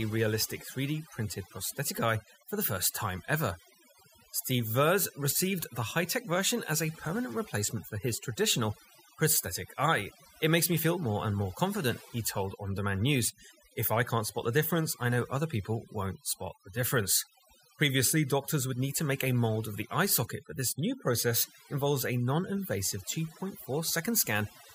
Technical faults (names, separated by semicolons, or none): overdone noise removal